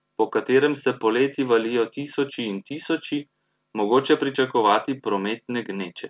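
Nothing goes wrong in this one: the speech comes over a call path with nothing above 4 kHz, which fits G.711 mu-law at 64 kbps, and there's no fault to point to anywhere in it.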